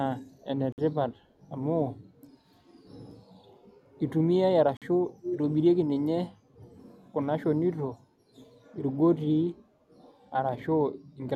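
At 0.32 to 0.41 s there's a faint delayed copy of the speech arriving 297 ms late, likely an echo leak from a speakerphone whose canceller let some through. The two dropouts at 0.72 to 0.78 s and 4.77 to 4.82 s, about 50 ms of silence each, are likely Bluetooth stalls where the headphone buffer ran dry. The echo comes back at 5.22 to 5.38 s nearly as loud as the speech itself, then faintly at 6.65 to 6.72 s and 9.90 to 9.96 s, always with the same delay.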